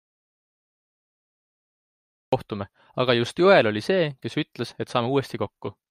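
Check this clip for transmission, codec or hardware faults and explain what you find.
One fault stands out: an audio dropout to silence at the start. From 0 to 2.33 s the speech track is silent, already under way when the clip begins. There is no room tone or hiss at all. The speech then arrives abruptly at 2.33 s. The likely cause is a lost input, such as a disconnected device, a failed link or a mute, while the recorder kept writing silence. Whatever was spoken before then is gone.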